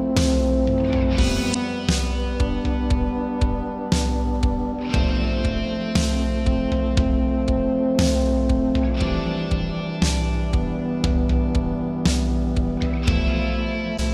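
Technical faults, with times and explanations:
1.50–1.56 s and 13.94–13.99 s, damaged data in a compressed stream: two short bursts, about 55 ms each, where corrupted bytes in the compressed stream throw the decoder off. It misreads those frames and hunts for the next valid frame header, so you get a brief glitch.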